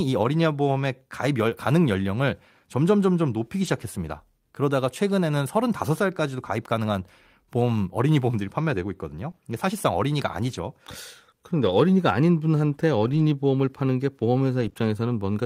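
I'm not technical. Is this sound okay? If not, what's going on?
No. At 3.63 to 3.69 s there is a lost packet rebuilt from error correction: a backup copy fills the hole, so nothing drops out, but it sounds briefly rough and noisy. Between 9.31 and 14.77 s there are scattered short gaps: about three tiny holes, each patched by stretching the last sound, causing quick ticks or hiccups spread out rather than one rough spot.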